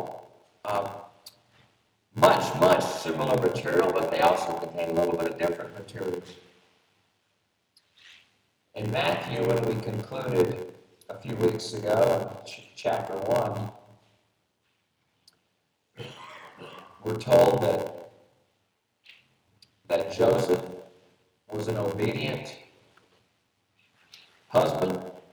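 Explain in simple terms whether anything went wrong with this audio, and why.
A steady 86 Hz buzz runs throughout, and everything plays about 14% slow at normal pitch: a block size mismatch (padded), with each short block topped up with silence.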